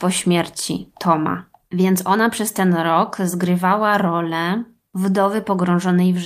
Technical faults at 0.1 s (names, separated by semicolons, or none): none